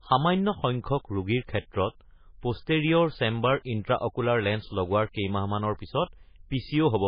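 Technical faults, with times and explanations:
Throughout, MP3 compression: the encoder was likely starved of bits, which fits a bitrate near 16 kbps. It discarded everything above 5 kHz and zeroed weak frequency lines frame by frame, leaving the speech dull, heavily damaged and watery, with swirling artefacts.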